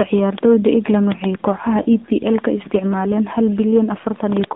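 Speech passed through the AMR narrowband mobile codec, at a rate that fits 7.4 kbps. The band runs from 150 Hz to 3.7 kHz, and the coding damage is plainly audible as buzzy, synthetic tone. At 1.82 to 1.86 s, lost AMR speech frames cause a brief dip or warble. That matches one missing 20 ms frame, which the decoder covered by repeating its last settings at reduced gain.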